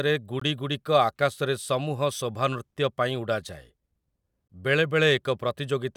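At 0.40 s, just before "ଆକାଶରେ ସମୂହ ଶୋଭାନୃତ୍ୟ", and again at 4.48 s, the speech cuts to silence for 18 ms, then resumes where it stopped. This is a Bluetooth stall, likely the wireless link briefly starving the headphone buffer. It leaves a clean gap rather than a click's spike.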